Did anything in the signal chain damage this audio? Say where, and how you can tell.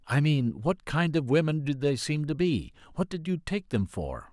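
No, none of the stages in the signal chain left any audible damage on this speech recording. Nothing in the sound points to a problem at any point in the clip.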